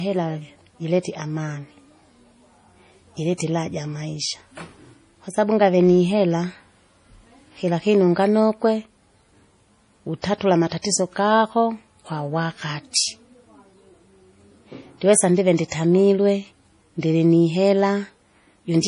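Across the whole recording the speech has a hard ceiling, with nothing above 10.6 kHz, and the damage is heavy. Sibilants sound watery and swirly, and weak high detail flickers in and out from frame to frame. This is likely MP3 compression at a low bitrate, around 32 kbps. Short of bits, the encoder cuts the treble at a fixed point and discards quiet spectral lines.

Pre-echo appears three times, at 10.22–10.24 s, 10.82–10.84 s and 12.92–12.95 s. Each time, a brief hiss runs ahead of a sharp onset, spreading 21 ms, 25 ms and 32 ms respectively, and the attack itself sounds softened. The codec spreads its quantisation noise across a whole transform block. When a transient lands late in that block, noise sized for the loud part also fills the quiet moment before it.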